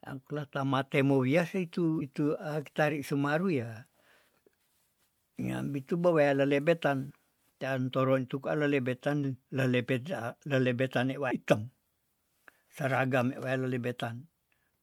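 At 2.00, 7.10, 11.30 and 12.69 s the speech jumps forward where compressed frames were skipped: whole blocks of coded audio never reached the output, either missing or rejected by the decoder as damaged. Roughly a tenth of a second vanishes at the first and third, less at the second, about 150 ms at the fourth, consistent with 26 ms frames. Each join is a soft smeared blip, not a click; a spectrogram shows an abrupt content shift with brief smearing.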